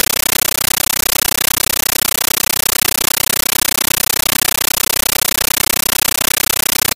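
In place of the intended sound, the whole clip carries a compressed stream played as audio: loud, harsh chattering static that never resolves into program material. The bursts repeat at 31.25 Hz, each about 13.3 ms of dense noise followed by silence, which is how undecoded AC-3 frames look when raw data is treated as PCM. The density of the bursts fits a 640 kbps Dolby Digital stream passed over S/PDIF or HDMI without a decoder.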